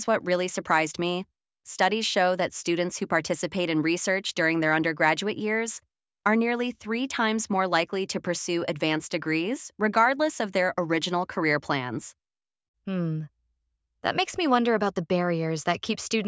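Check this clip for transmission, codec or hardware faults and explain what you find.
Nothing turned up here in the way of transmission, codec or hardware trouble, so there's nothing to flag.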